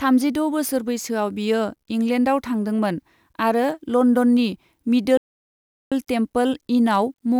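A speech recording with a playback stall from 5.17 to 5.92 s, where the sound cuts off in mid-flow and the output goes completely silent for about 0.74 s before it picks up again. The likely cause is the player running short of data or having its thread blocked until it recovered. Unlike a natural pause, the silence breaks the sound abruptly, and at nearly three-quarters of a second it is far longer than a brief packet-loss dropout.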